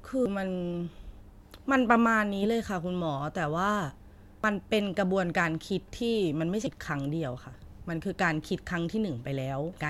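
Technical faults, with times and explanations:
0.26 s, 4.44 s and 9.73 s: damaged data in a compressed stream. At each point the speech is broken by a brief chirp, squawk, click or short hole where the decoder met corrupted bytes, misread the frame, lost sync and hunted for the next valid frame header.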